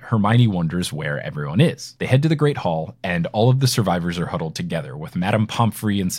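No technical faults can be heard anywhere in the recording; the signal stays intact and continuous throughout.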